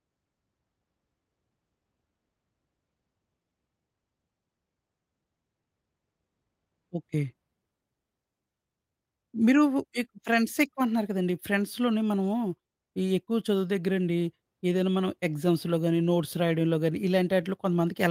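No technical faults can be heard anywhere in this speech recording.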